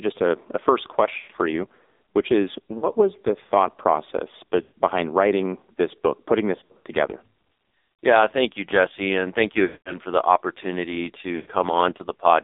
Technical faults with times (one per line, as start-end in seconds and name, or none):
0.00-12.44 AMR narrowband mobile codec
1.18-1.32 lost AMR speech frames
2.78-2.86 lost AMR speech frames
4.62-4.74 lost AMR speech frames
6.56-6.87 lost AMR speech frames
9.66-9.98 lost AMR speech frames
11.36-11.51 lost AMR speech frames